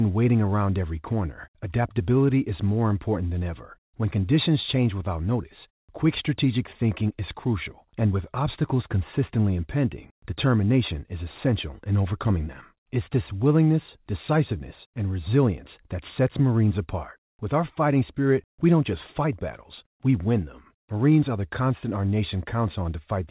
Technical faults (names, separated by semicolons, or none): none